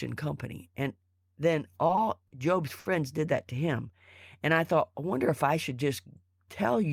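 Around 1.87 and 1.95 s, then 2.27 and 2.79 s, there's a short stall from a late packet: the jitter buffer ran dry, so the sound gets held about 20, 20, 40 and 60 ms, with a faint buzz or dip. Nothing's lost, and the speech resumes just before "did that to him".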